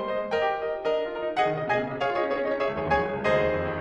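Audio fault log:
1.40–3.18 s, time-stretched section: the music abruptly runs at about 1.78 times its normal pace while its pitch stays where it was, so the passage sounds rushed. This is likely software compressing the section to fit a shorter length, holding pitch by dropping short slices of audio rather than resampling.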